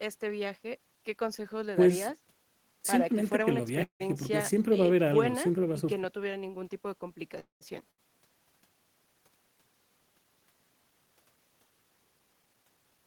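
At 3.83 s the speech stops and the last sound is held as a fading buzz or hiss, then about 110 ms of silence, for a 166 ms gap in all. Speech resumes at 4.02 s where it left off, with nothing lost. This is a call audio freeze, likely from packets delayed in transit so the jitter buffer ran dry. The gap pushes everything after it 166 ms later.

A second call audio freeze runs from 7.40 s to 7.63 s. It fills 208 ms, about 130 ms of it silent. Again no speech is missing. It adds another 208 ms of delay.

At 7.91 s a burst of packet loss follows. The receiver stretches the last sound for 70 ms and fades it out. Then 80 ms of speech is simply gone. The audio picks up again at 8.00 s, further on than where it broke off, and a fragment is skipped.

From 11.83 s to 12.99 s the speech plays at about 114% speed. Pitch stays the same, but the delivery sounds hurried. This is a jitter buffer speed-up. 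Too much audio had built up, probably from the earlier delays. The receiver trimmed tiny pitch-period slices again and again, roughly 150 ms in total, to bring the delay back down.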